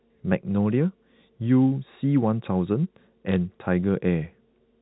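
At 3.29 to 3.36 s, bit errors on a digital phone line put a short burst of sharp ticks into the speech, heard through the muffled, 4 kHz-limited sound of G.711 telephone coding. Each flipped bit changes a single logarithmically coded sample, so a hit on the sign or a high-order bit makes an isolated spike, at a rate of a small fraction of a percent. Packet loss would leave gaps or smeared repeats, but here the speech between the ticks stays intact.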